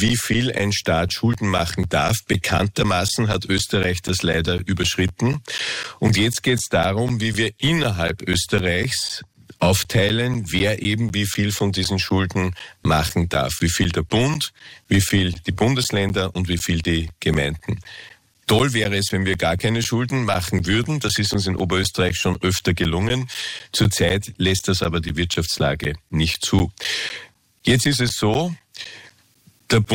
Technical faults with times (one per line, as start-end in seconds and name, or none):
0.09-29.86 periodic USB or driver dropouts